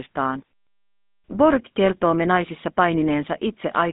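A buzzy, gravelly roughness sits on the speech from start to finish, and the sound is boxed into a narrow telephone band with almost nothing below 200 Hz or above 3.6 kHz and nothing at all past 3.8 kHz. This is the GSM full-rate codec, and its damage is plainly audible. It rebuilds each stretch of speech from a vocal-tract model driven by sparse, regularly spaced pulses, which fits a 13 kbps coder and leaves that grainy texture.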